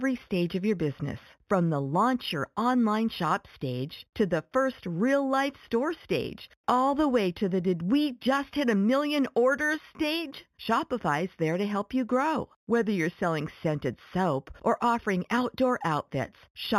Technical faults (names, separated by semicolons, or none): imaging from linear upsampling